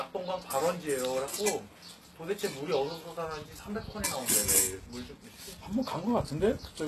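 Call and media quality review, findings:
Throughout the clip: treble sounds bright but synthetic. It turns gritty and metallic, and nothing is present above 12.3 kHz. Likely HE-AAC compression at a very low bitrate, near 16 kbps. Upper band rebuilt by spectral band replication from copied lower bands, so harmonics misalign.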